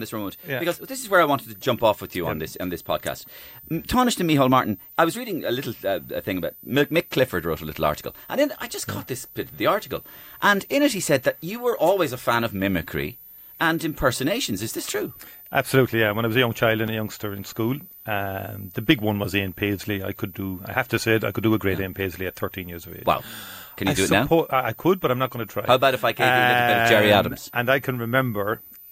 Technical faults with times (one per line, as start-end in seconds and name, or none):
0.00-28.91 switching supply whistle
16.88 block of digital silence
23.18 block of digital silence